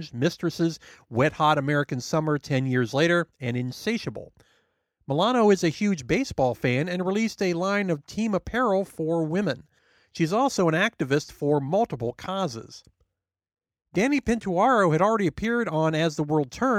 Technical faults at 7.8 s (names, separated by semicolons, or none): dropped samples